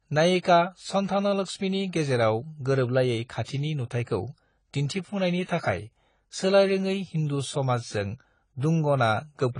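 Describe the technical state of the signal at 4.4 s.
At 4.4 s the speech carries audible AAC compression damage, present across the whole clip: likely an AAC-LC encode at a low rate near 24 kbps, with nothing above 10 kHz. A plain low-pass filter would only dull it; here sibilants also warble and fizz from coarsely quantised, gappy bands.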